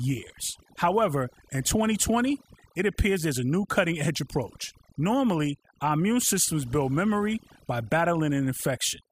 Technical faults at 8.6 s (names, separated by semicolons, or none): overdone noise removal